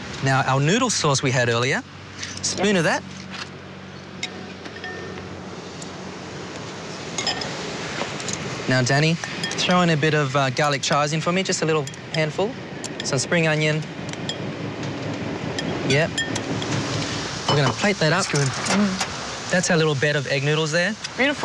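No technical faults can be heard anywhere in the recording.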